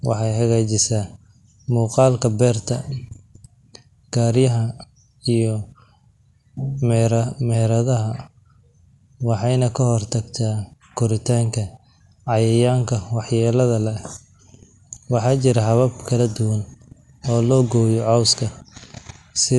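Throughout the speech the top end stops dead at 11.4 kHz, the sound is dull, and a rough, fluttering noise clings to voiced tones. The likely cause is Dolby Digital compression at a rate that fits a 64 kbps stream: the encoder narrowed the band and left many frequency lines to decoder-filled noise.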